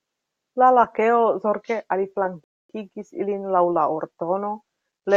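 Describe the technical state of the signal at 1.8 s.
At 1.8 s the speech signal is intact, with no audible dropout, distortion or other technical fault at that moment.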